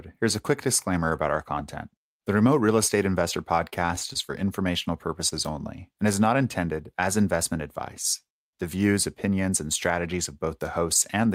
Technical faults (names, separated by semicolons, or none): repeated packet loss (robotic sound); short concealed packet loss